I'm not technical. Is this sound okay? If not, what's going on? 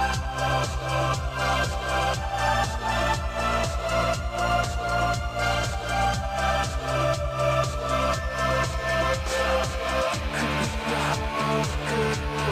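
Yes, the sound is fine from a technical point of view, with nothing going wrong anywhere in the recording.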